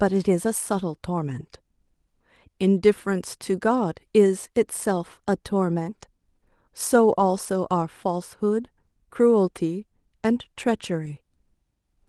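At 7.19 s and again at 11.05 s, a lost packet is rebuilt from error correction. Each time, one packet of speech never arrived. The packet after it carried a low-bitrate backup copy, and the decoder played that instead. So there is no gap. For about 20 ms the speech turns rougher and noisier, then clears. This happens over the Opus call path, whose 12 kHz upper limit applies throughout.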